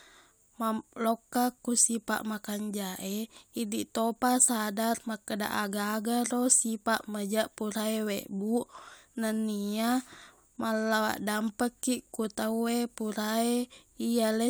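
No technical faults can be heard in this speech recording. Nothing in the audio marks a point in time that needs attention.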